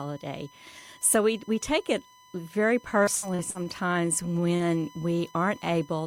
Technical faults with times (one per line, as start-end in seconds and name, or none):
0.00-6.07 USB whine
3.03-3.69 repeated packet loss (robotic sound)
3.57-4.41 jitter buffer slow-down
4.56-4.63 short concealed packet loss